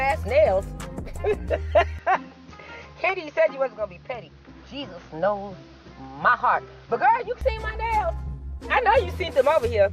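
From 1.99 s to 7.41 s the sound turns dull and boxy, losing everything above 6.6 kHz and gaining faint new background noise, then clears; likely an input switched to a poorer device. A filter wouldn't change the background, and the level holds without gaps.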